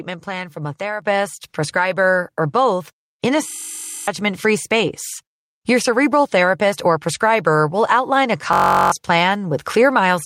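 A speech clip with two kinds of fault. At 1.02 s, just after "plan from a", the microphone volume is stepped up by about 7 dB. Voice and background noise both jump louder together, in a single step. This is the call software finding the input too quiet and raising the device level mid-sentence. The new level then holds. A system hang loop appears twice. From 3.48 to 4.08 s, just before "free space", a tiny slice of sound repeats exactly. Each repeat lasts 21.33 ms, so the loop runs at 46.9 Hz. That short cycle is heard as a steady buzz. It happens again from 8.53 to 8.92 s, right after "prescriber will outline a". The machine froze while the sound hardware kept replaying one ring buffer. The loop length fits a 1024-sample buffer. Real audio is lost underneath, around 0.7 s in the first hang and 0.4 s in the second.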